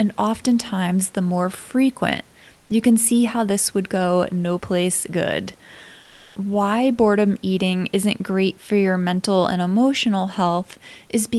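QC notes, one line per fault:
2.59–2.67 s and 6.03–6.35 s: comfort noise in place of the background. In both pauses the room's background noise becomes a flat, featureless noise, about 2 dB quieter in the first and about 2 dB louder in the second. Likely Opus discontinuous transmission, with the receiver synthesising filler noise.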